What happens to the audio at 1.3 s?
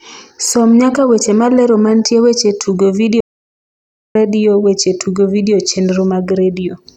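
Nothing goes wrong at 1.3 s; the speech carries on cleanly through that moment with no dropout, click or distortion.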